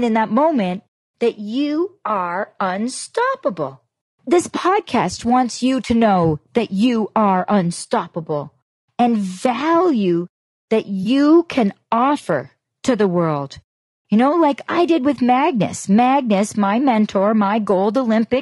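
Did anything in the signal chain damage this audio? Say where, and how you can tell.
Yes. The speech sounds rough and grainy throughout, with noise between the harmonics. This is likely low-delay AAC compression at the codec stage, consistent with a bitrate around 32 kbps.

From 11.03 to 11.06 s, between "unstoppable and value that" and "can offer to the", a brief smeared, noisy or phasey patch marks AAC frame loss with concealment. The decoder rebuilt about 20 ms from the previous spectrum, which fits a single lost frame.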